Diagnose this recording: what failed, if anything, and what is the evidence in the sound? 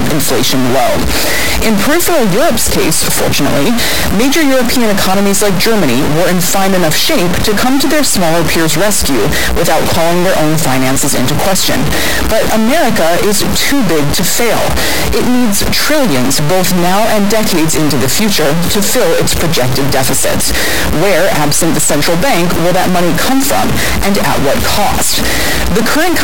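Harsh buzz all the way through, with loud noise filling even the pauses: a stuck bit, likely a high converter bit, shifting samples by about -5 dBFS.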